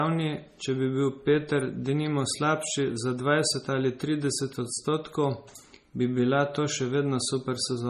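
Running the whole length of the speech, the audio appears to have been squeezed through a low-bitrate MP3 encoding and later re-saved as a high-bitrate MP3. The character of the damage points to roughly 32 kbit/s first and 320 kbit/s afterwards. This is low-bitrate audio saved at a high bitrate: the second pass cannot put back what the first discarded. The result is a hard ceiling with nothing above 15 kHz, plus a dull, smeared quality that the larger file does nothing to hide.

At 1.60 s, a brief electrical switching spike, most likely a nearby switch or static discharge arcing into the audio line, lands on top of the speech. It lasts only about 10 milliseconds and comes through as a sharp snap or tight cluster of clicks, sitting apart from the speech as a click on the line rather than anything in the recorded sound itself.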